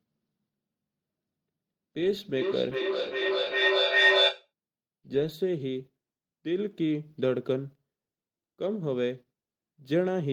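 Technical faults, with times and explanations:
2.34–4.51 s, feedback howl: a loudspeaker's output re-entered a microphone on the same call, gaining level each trip, so the repeats narrowed to a tone near 2 kHz, pulsing roughly every 0.4 s and peaking about 5 dB above the speech.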